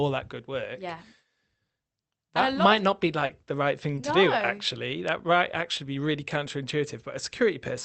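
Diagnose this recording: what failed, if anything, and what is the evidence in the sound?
Network stage: short concealed packet loss in the speech, a 40 ms gap from 3.25 s and a 20 ms gap at 3.95 s. Packets reached the Opus decoder too late, so it extended the preceding sound and crossfaded back, leaving brief smears.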